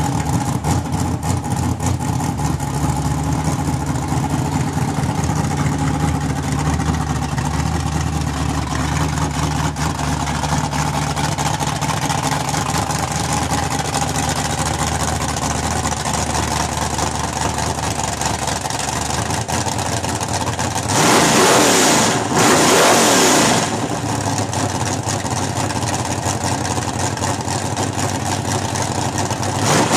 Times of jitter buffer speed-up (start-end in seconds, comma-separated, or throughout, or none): none